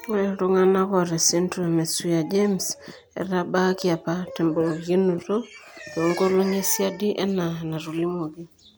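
The recording carries through its whole duration with no audible technical fault at any point.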